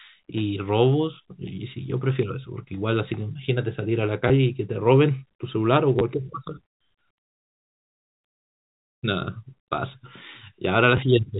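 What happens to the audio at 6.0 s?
Right around 6.0 s, from 5.99 to 6.01 s, there's packet loss with the last packet repeated. About 20 ms of audio went missing, which fits two 10 ms packets, and the receiver just replayed the previous chunk to fill the gap. That replay comes across as a quick robotic stutter.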